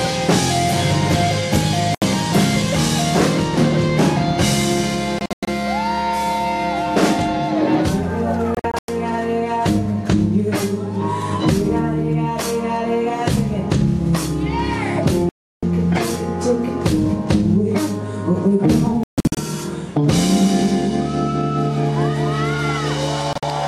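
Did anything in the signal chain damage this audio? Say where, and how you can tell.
Yes: a digital broadcast dropout, in the reception and decoding stage. Sound mutes at 1.95, 5.19, 8.55, 15.29, 19.03 and 23.33 s, for 72 to 336 ms, some as scattered clusters of short holes. The waveform shows flat silent gaps and the spectrogram shows blank full-height columns, as the receiver silenced frames, which fits roughly 24 ms frames, until good ones returned.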